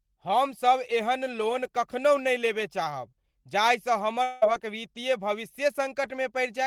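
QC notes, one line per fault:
4.23–4.44 s, long network dropout: audio likely stopped arriving after "लेबय चाहब जाहिसँ", so the receiver stretched the last sound into a fading buzz or hiss, losing about 0.18 s.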